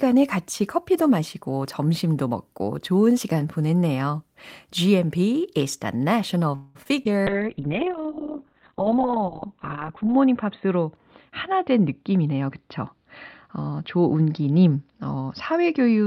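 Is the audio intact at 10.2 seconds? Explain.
No. At 10.2 s the audio sits inside a call bitrate drop lasting from 7.29 s to the end, where the encoder falls from 32 to 6 kbps and its bandwidth narrows from 20 kHz to 4 kHz. The speech sounds muffled and rough, and a spectrogram shows a flat ceiling with nothing above 4 kHz.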